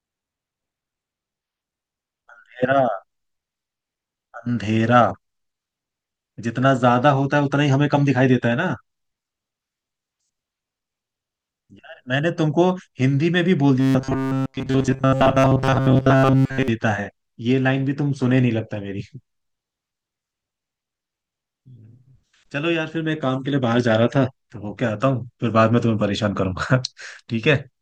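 From 13.80 to 16.68 s, robotic sound from repeated short buffers: the speech collapses into a rigid metallic buzz near 133 Hz, likely from a roughly 7.5 ms buffer replayed for most of that stretch.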